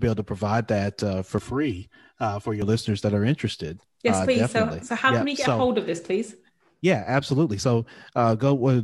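From about 1.38 to 2.62 s the speech goes hollow and phasey, a classic case of channel delay (comb filtering). One channel lags the other by roughly 3 ms, and summing them to mono carves evenly spaced notches starting somewhere near 150 Hz.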